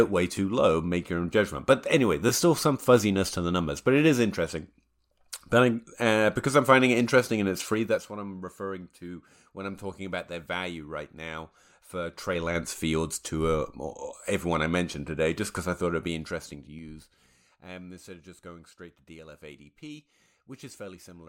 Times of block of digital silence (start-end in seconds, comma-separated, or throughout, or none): none